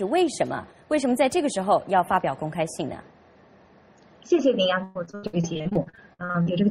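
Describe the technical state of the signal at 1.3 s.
At 1.3 s the signal is intact, with no audible dropout, clipping, glitch or other fault at that point.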